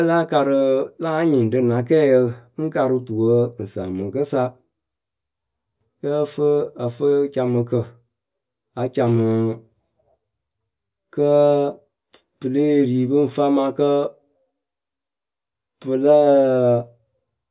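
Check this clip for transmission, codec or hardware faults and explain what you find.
No faults detected here.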